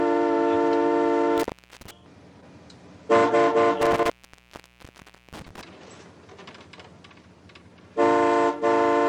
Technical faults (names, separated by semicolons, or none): intermittent contact